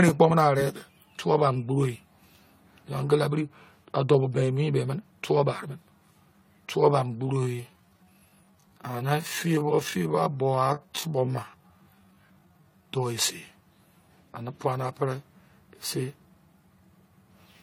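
Throughout the recording, the speech has likely been through repeated lossy encoding, about three passes, consistent with AAC-LC near 64 kbit/s. That generation loss stacks quantisation noise and spectral gaps, so the speech sounds swirly, hollow and smeared, and attacks soften.

From 7.19 to 12.87 s, a time-stretched section likely slowed the audio to about 0.67 times its original speed while holding pitch by repeating short fragments. The pace drags abruptly.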